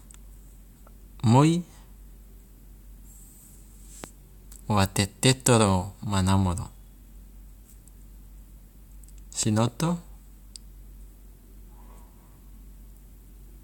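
Stray voltage pulses, likely from static or a switch, hit the signal: a loud pop at 4.04–4.06 s and a double pop at 9.43–9.70 s over continuing speech.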